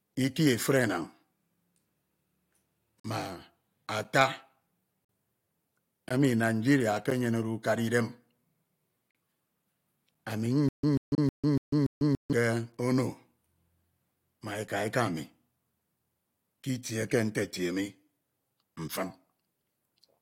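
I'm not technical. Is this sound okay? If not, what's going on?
No. At 3.00, 4.04, 5.05, 6.09, 7.10 (just before "ukana idem"), 9.11, 10.15 and 11.15 s there are gaps between stream segments: sharp-edged silences of about 6 to 47 ms, roughly once a second, where the one-second pieces of the stream don't quite join. No speech is missing.

From 10.69 to 12.33 s, ending just before "ke ono", there is a stutter with silent gaps. A 0.14 s snippet plays five times, each followed by about 0.15 s of silence. The stream likely stalled and kept replaying its last piece. Unlike the gaps, this repeats sound and loses the speech that should have played there.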